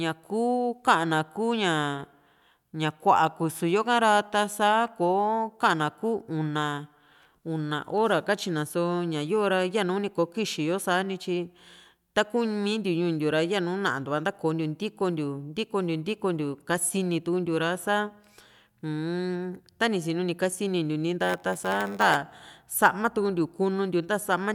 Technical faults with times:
21.21-22.15 block size mismatch (padded)

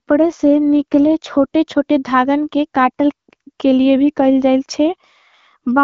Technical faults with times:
none

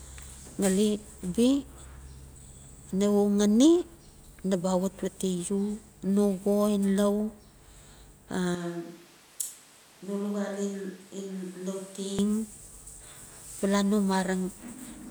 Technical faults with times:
8.55-12.19 switch to a distant microphone

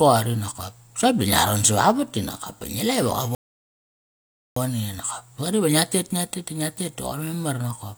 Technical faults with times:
3.35-4.57 rebuffering stall

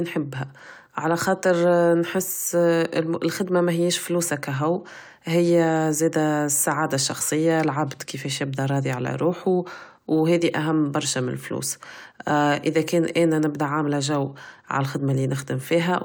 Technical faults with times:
none

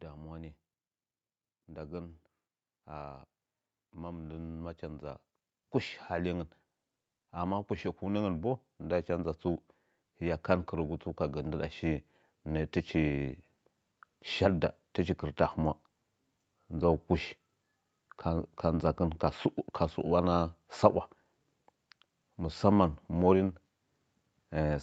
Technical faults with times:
1.52-6.53 automatic gain rising
7.32-9.44 automatic gain rising
10.01-13.34 automatic gain rising

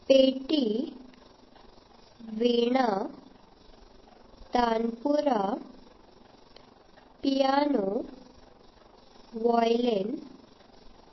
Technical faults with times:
0.00-11.12 overlap-add ripple
0.00-11.12 MP3 compression

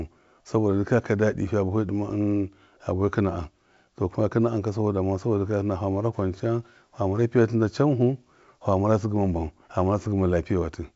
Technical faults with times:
none

